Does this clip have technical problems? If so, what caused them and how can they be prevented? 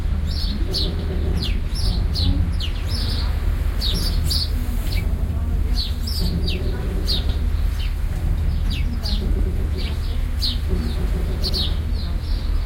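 Yes: a short stutter at 0.99, 3.09, 5.19, 7.29 and 11.49 s, from overlapping chunks, where each 2.0 s chunk restarts early and replays about 100 ms at the join. To prevent it, trim or crossfade the overlap so every sample plays only once.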